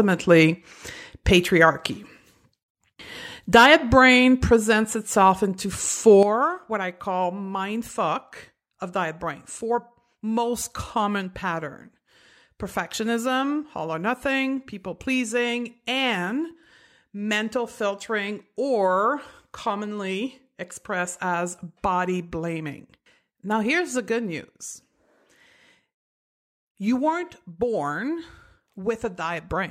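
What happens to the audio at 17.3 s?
At 17.3 s the audio is still sitting in a level drop that began abruptly at 6.23 s and holds to the end: a sudden gain jump of about -9 dB. The cause is likely a digital gain change applied between one sample and the next with no ramp. Unlike a fade or compressor action, the drop is a single instant step rather than a gradual slope, and the background noise falls by the same amount as the speech.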